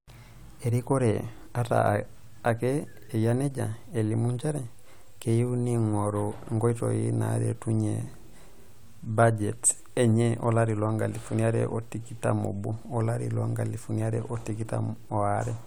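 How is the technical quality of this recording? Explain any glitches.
No technical glitches can be heard in this speech recording; the signal stays intact and continuous throughout, with nothing interrupting or disturbing it.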